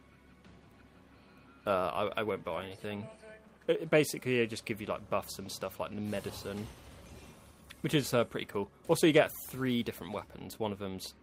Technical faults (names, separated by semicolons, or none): none